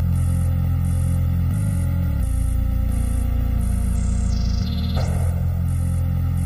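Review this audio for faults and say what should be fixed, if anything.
Channel delay (comb filtering) throughout: one channel lags the other by roughly 1.5 ms, so the mono sum cancels evenly spaced bands from around 300 Hz upward, sounding hollow and phasey. To prevent it, time-align both channels before summing to mono.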